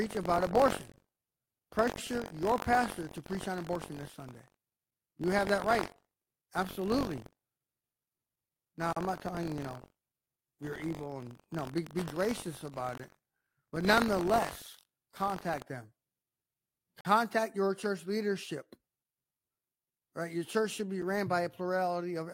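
From 0 to 15.6 s, buffer tearing puts a steady 46.9 Hz robotic rattle on the speech, consistent with a 1024-sample buffer. Stale audio overwrites each period, so the rattle appears only with signal. A gap between stream segments, by contrast, is silence. Hard-edged holes at 0.92, 8.93, 12.98, 17.01 (just before "your church leadership") and 21.02 s (after "church should be") recur about every 4 s, each lasting 7 to 43 ms, and no speech is lost.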